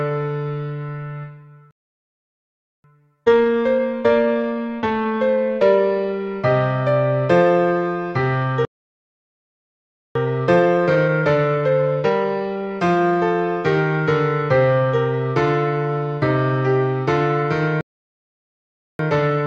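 The audio cuts out in mid-flow three times, going silent from 1.71 to 2.84 s, from 8.65 to 10.15 s and from 17.81 to 18.99 s, gaps of about 1.1, 1.5 and 1.2 seconds. These are playback stalls, likely caused by the player's buffer running dry or its output thread being blocked, so nothing reached the output until it recovered. After each gap the sound runs hurried but at its normal pitch from 2.84 to 5.84 s, from 10.15 to 13.15 s, and from 18.99 s to the end of the clip. This is time-compressed catch-up. The player is working off the backlog left by each stall by cutting out small slices and cross-fading across the joins, which plays the material about 1.1 times faster without shifting its pitch.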